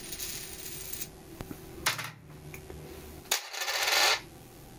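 A recording of sounds with gain pumping throughout: the level swings by roughly 25 dB, leaving everything squashed. The likely cause is input gain set far too high, with a fast limiter clamping down on every peak.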